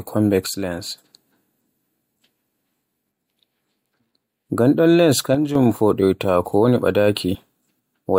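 From 0.46 to 1.04 s, and again from 5.35 to 5.55 s just before "foɗoyta ko woni", the speech level drops abruptly by about 6 dB and then recovers. This is most likely one channel dropping out: with one stereo side gone, the mono sum keeps only half of the shared signal. On a waveform the envelope steps down by half its amplitude with sharp edges. A spectrogram shows the whole band dimming uniformly, with no change in spectral shape.

At 7.34 s, right after "foɗoyta ko woni", compressed frames are skipped. About one 21.3 ms frame, roughly 20 ms of speech, never plays, so the sound jumps slightly forward. The waveform shows a small discontinuity in the speech pattern, and the spectrogram shows a narrow vertical mark where the harmonics shift abruptly.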